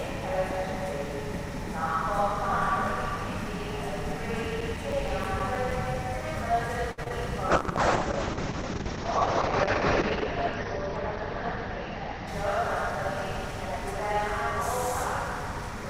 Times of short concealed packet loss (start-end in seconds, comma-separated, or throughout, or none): 7.04-7.12